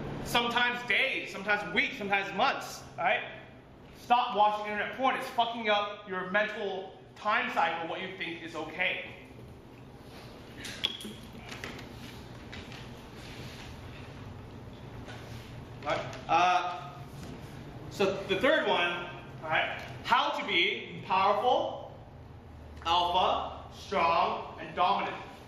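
The audio carries no audible technical faults anywhere in the recording, with the signal level, continuity and tonal balance holding steady throughout.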